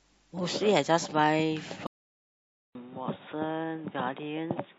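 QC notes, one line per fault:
1.87 s to end: input switched to a poorer device. The recording likely moved from the original microphone to a lower-grade input. After about 0.2 s of silence at the switch, the speech returns with nothing above 3.8 kHz, so it sounds dull and boxy, missing the crisp consonant detail it had before. The loudness stays about the same, but a new background noise floor sits roughly 30 dB below the speech, noise that wasn't there earlier.
2.04–2.72 s: rebuffering stall. Playback ran out of downloaded audio and stopped until more data arrived. The speech cuts to silence for about 0.68 s, then picks up exactly where it left off. No audio is lost, but the gap adds that much time. Because it lands just after the device switch, the new dull, noisy sound is broken up by a second stretch of dead air.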